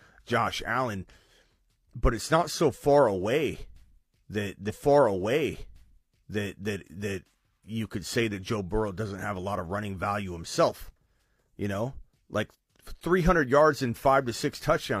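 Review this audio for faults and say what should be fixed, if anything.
At 4.65 s there's a stream segment repeated: the audio jumps back and replays about 2.0 s of speech, running to 6.64 s, with a small blip at the jump before "that you could say" picks up. The player fetched or queued that segment twice, so the same stretch went out again and the clip runs about 2 s longer. Fix the player to track segment sequence numbers and drop any duplicate before it reaches the buffer.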